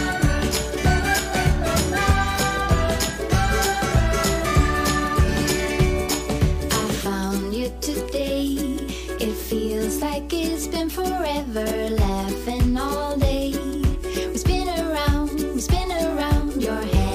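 A steady low 60 Hz tone, sitting about 15 dB below the sound, runs throughout: mains hum from a ground loop or nearby transformer leaking power-line current into the signal.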